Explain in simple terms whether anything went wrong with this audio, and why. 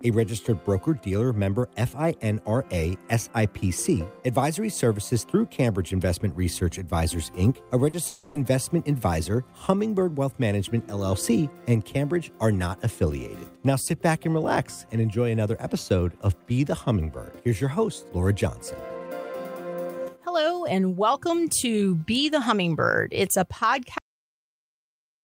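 Three things go wrong in this audio.

At about 7.89 s there is a short concealed packet loss. Roughly 40 ms of sound never arrived in time, so the player guessed by stretching out the last bit it had, then blended back into the real audio. You hear a quick smear or tiny wobble. It is very brief, which separates it from the longer gap just after it.

From 8.07 to 8.37 s the sound turns into a stretched, buzzy or hissy continuation that fades for about 280 ms before the real audio returns. The entire stretch is filled this way, with no silent patch. The likely cause is a long network dropout: nothing came through for that whole time, so the player kept inventing sound until the stream resumed, and that part of the original is lost. Unlike the blip at 7.89 s, this lasts long enough to be heard as a distinct fading buzz.

At 23.98 s there is a cut-off end. The audio stops dead in the middle of a sound and falls straight to silence, with no natural fade or tail. 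This happens when the final chunks of audio were never saved or played. Unlike a dropout, nothing comes back afterwards: from 23.98 s to the end of the file there is only silence.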